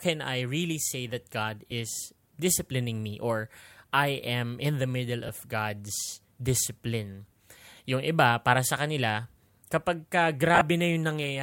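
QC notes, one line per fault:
1.71 s, lost LE Audio frames: a 7.5 ms gap, which fits a single lost LC3 frame. The decoder refilled it by repeating the previous spectrum with randomised signs, so the speech briefly smears into noise.
5.27 s, lost LE Audio frames: a 15 ms gap, consistent with two consecutive lost frames. The concealment repeats the same sign-scrambled spectrum, giving a short noisy blur.
10.55–10.61 s, lost LE Audio frames: 30 ms of concealed audio scattered across 60 ms, with the longest unbroken run about 15 ms, so several brief smears cluster together.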